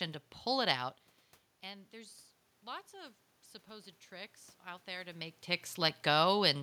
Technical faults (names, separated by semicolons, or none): automatic gain rising